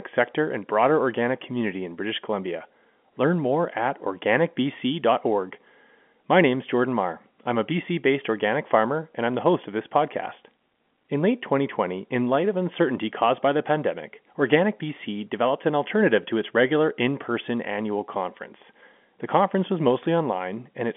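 No technical faults can be heard in this recording.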